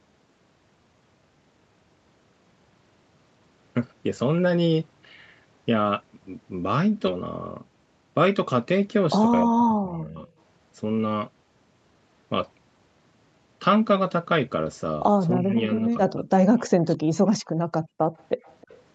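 At 7.07 s the speech jumps forward abruptly. Roughly half a second of material is simply gone, and the two sides are butted together with no pause or fill. This is a skip ahead: a stretch of audio was discarded in transit or by an overflowing jitter buffer while later audio was already queued, so playback resumed from the newer packets and the delay shrank by about the same half second.

From 9.46 to 10.27 s, then 15.39 to 15.98 s and 16.14 to 17.33 s, the talker's level sinks and parts of the speech thin out or break into fragments. The first two dips reach around 20 dB, and the third is far deeper, around 40 dB, cutting most of a second almost to silence. The likely cause is speech suppressed in double talk: with both ends talking at once, the echo canceller could not tell this talker from loudspeaker echo and attenuated everything.

Near the end, a faint delayed copy of the speech appears. 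There is a brief scrap at 17.77 to 17.81 s, very low at around 35 dB below the speech, and a longer, slightly stronger trail from 18.16 to 18.76 s at around 30 dB down, both lagging by 320 ms. This is likely an echo leak: the far end's echo canceller left some of its loudspeaker pickup in the signal and sent it back.

Between those two, from 17.84 to 17.98 s, the room background briefly drops away by about 28 dB and then returns. This is background gated by the echo canceller, which clamped the microphone hard while the loudspeaker played and released it a moment later. Throughout, the sound stops at 8 kHz, the band limit of the call's Opus path.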